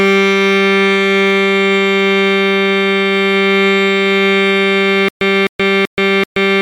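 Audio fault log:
5.09 s to end (6.62 s), stutter with silent gaps: the music locks onto a 257 ms burst that plays four times, each followed by about 127 ms of dead digital silence, so it pulses every 384 ms until the clip ends. This is likely a stalled player or stream replaying its last fragment at each retry, and the music that should have followed is lost. The evenly timed silent gaps set it apart from a seamless loop or random dropouts.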